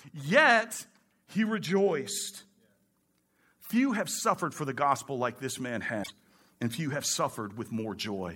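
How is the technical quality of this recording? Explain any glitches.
There's one glitch worth flagging in this speech recording. From about 6.00 to 6.11 s you get a short burst of damaged data in a compressed stream. Part of the encoded file got corrupted there, so the decoder couldn't read those frames properly, lost its footing, and had to hunt for the next valid frame header before it could pick the audio back up. What you hear is a brief glitch lasting roughly a tenth of a second.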